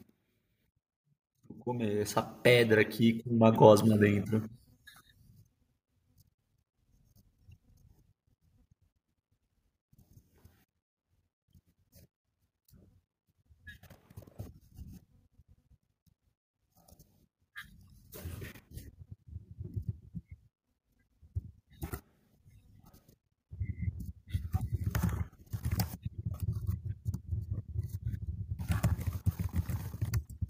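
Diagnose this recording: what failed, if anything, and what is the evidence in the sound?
The automatic gain control in the call processing judged the input too quiet and ramped its gain up by about 9 dB between 1.66 and 4.34 s. The speech and the background noise floor swell together over those seconds rather than the talker getting louder alone.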